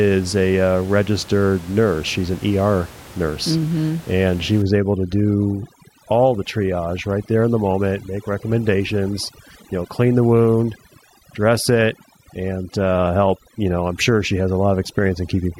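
Speech recording where, from 4.62 s to the end, overdone noise removal strips away quiet parts of the voice and leaves twinkling specks in place of the room noise, which sat about 21 dB below the speech before. Unlike a gate, which shuts everything at once, this strips individual frequency bands.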